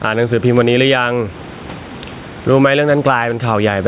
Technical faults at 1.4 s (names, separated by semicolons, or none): gain pumping